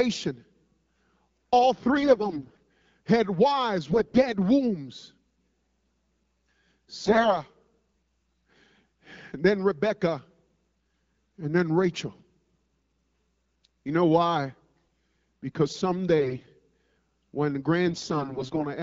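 Speech carried over an AMR wideband (HD Voice) link, with only light coding damage at a rate that sounds consistent with 12.65 kbit/s. AMR bit errors make it hoarse and gargly at 1.98–2.58 s (just before "had wives"), 3.87–4.29 s (just after "had wives"), 7.03–7.41 s, 16.2–16.5 s and 17.88–18.64 s. Flipped low-priority bits misplace excitation pulses and skew pitch, gain and spectral detail while overall pitch and level roughly hold.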